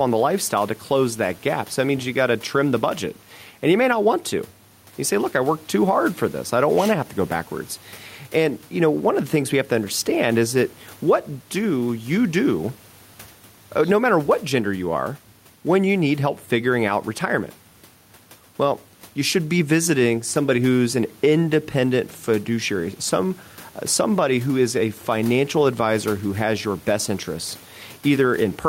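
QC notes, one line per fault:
Throughout, gain pumping: gain likely far too high, with a fast limiter clamping every loud syllable; the gain swings around 5 dB, and the speech sounds squashed.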